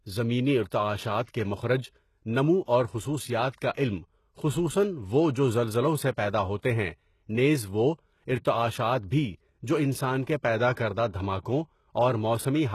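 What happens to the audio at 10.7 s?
Right at 10.74 to 10.77 s there's a pre-echo: a short hiss leading into a sharp attack for about 34 ms. The codec spreads quantisation noise across its whole transform block, so noise meant for the loud onset leaks into the quiet moment before it, and the attack comes out softened and smeared.

That sits on top of codec damage that runs through the whole clip and is plainly audible. There's nothing above 12.3 kHz, and the treble sounds rebuilt rather than real, with gritty, metallic s sounds. It's likely HE-AAC compression, copying lower bands upward to fake the top end, at a rate that fits roughly 16 kbps.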